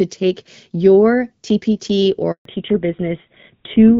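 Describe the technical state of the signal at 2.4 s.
At 2.4 s the call is inside a handover gap. While the phone switched networks, no speech frames arrived for 140 ms, from 2.31 to 2.45 s. The speech dies away within a few tens of milliseconds and stays silent until the new link delivers sound.

Straight after the gap, from 2.45 s to the end, comes a fallback to narrowband. The link dropped from HD Voice to an older codec, most consistent with GSM full rate. Nothing above 4 kHz remains, so the speech turns duller and rougher.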